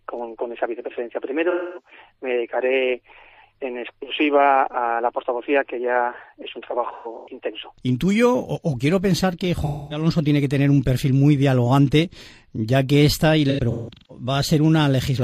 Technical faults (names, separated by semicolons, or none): AAC frame loss with concealment